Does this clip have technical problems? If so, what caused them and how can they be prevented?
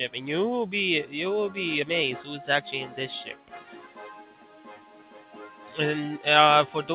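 Yes. The first is a noise suppressor applied to music or sounds, running across the whole clip. A speech-tuned suppressor treats held tones, ambience and reverb as noise, so sustained parts and tails keep getting pulled down while attacks slip through. Here the level swings by around 10 dB, which gives the sound a pumping, fluttery, thinned-out feel, all squeezed into the narrow, dull band you'd expect from a call path that stops at 4 kHz. To prevent it, switch off noise suppression, or use a music mode, whenever the source isn't speech.

The second is sound cut by the noise suppressor from 3.31 to 5.77 s. Through that stretch the suppressor decided the material was noise and ducked it harder than the rest, with the deepest dip about 10 dB down. Steadier, decaying parts sink most and their tails get clipped short, while sharper onsets hold up better. The same fix applies: keep the suppressor out of the chain for non-speech audio.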